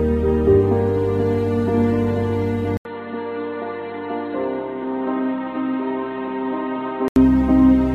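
At 2.77 s the sound drops out for 80 ms, then returns dull and boxy. Nothing remains above 4.2 kHz, the level falls about 5 dB, and a new, faint noise floor appears. The input likely switched to a poorer device. Full bandwidth returns at 7.16 s.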